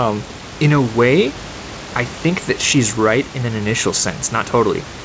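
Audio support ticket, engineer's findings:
No defects found in the speech: room noise sits about 15 dB below the talker and the call path's band-limiting with nothing above 8 kHz fits G.722 at 64 kbps, both expected behaviour.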